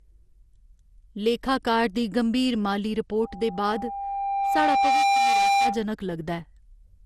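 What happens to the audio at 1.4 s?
The audio was likely decoded and re-encoded around ten times through an MP2 codec, with artefacts that point to roughly 96 kbit/s. This is generation loss, and it runs through the whole clip, including 1.4 s. Each pass quantises again on a shifted frame grid, so the noise and spectral gaps build up. The speech sounds swirly, smeared and hollow, attacks are blurred, and nothing remains above 15 kHz.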